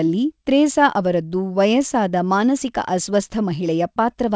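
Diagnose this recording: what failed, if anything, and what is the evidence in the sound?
Nothing failed here: the speech comes through a call path whose content stops at 8 kHz, which fits a wideband codec like G.722, and nothing in the sound points to a fault at any stage.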